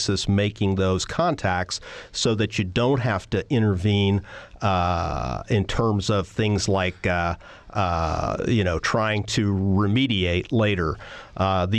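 Speech recording with no audible technical faults.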